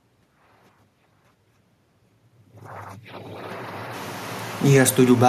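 From 4.6 s to 5.24 s the speech sinks by about 4 dB, and the room noise behind it drops with it, so the whole sound pulls back rather than the talker alone. That shared fall marks it as automatic gain falling: the gain control judged the input too loud or its background noise too strong and eased its gain down over those final moments. The level shift near 2 s is different, since the talker moved and the background stayed put.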